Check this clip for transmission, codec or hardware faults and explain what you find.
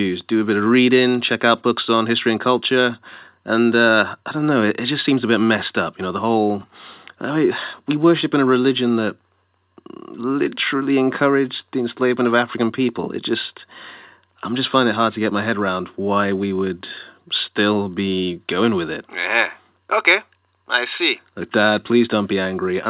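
No transmission, codec or hardware faults turn up in this speech recording. It has gone through a call path whose narrowband sound, with nothing above 4 kHz, fits a G.711 mu-law codec at 64 kbps working as intended.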